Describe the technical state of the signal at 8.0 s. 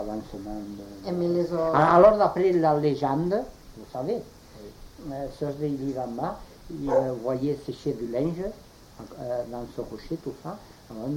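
Nothing goes wrong with the signal at 8.0 s; the audio is intact at that point.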